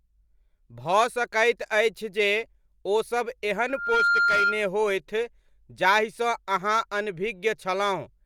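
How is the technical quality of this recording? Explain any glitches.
The recording has one clear fault: a burst of loudspeaker feedback squeal. From 3.68 to 4.70 s a single tone at 1.4 kHz rises out of the speech. It swells over roughly a third of a second, then holds about 5 dB above the speech level until it stops. A microphone was picking up a loudspeaker it was feeding. At 1.4 kHz the loop gain went above one. That frequency built on itself into a steady squeal lasting about a second.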